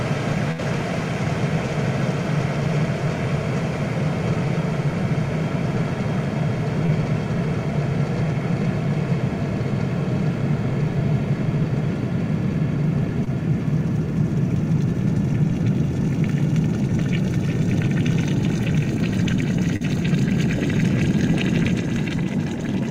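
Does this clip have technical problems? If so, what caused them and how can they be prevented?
Yes. A burst of packet loss at 0.51 to 0.60 s drops about 60 ms. The receiver stretches the last sound and fades it, which shows as a smeared, decaying band on a spectrogram. A larger jitter buffer or forward error correction would prevent it.

Short concealed packet loss at 6.86, 13.24 and 19.76 s briefly smears the sound and leaves small blurred seams in the spectrogram. Lower network jitter, or redundancy coding, would prevent these.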